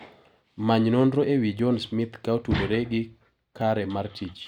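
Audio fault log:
1.59 s and 3.61 s, dropped buffer (overrun): The likely cause is the recording program falling behind, so the hardware overwrote a block of samples before it was read. Only a very short slice of the speech, a millisecond or two, is missing each time, and the audio on either side is joined directly with no gap. At that abrupt splice the sound skips ahead rather than pausing.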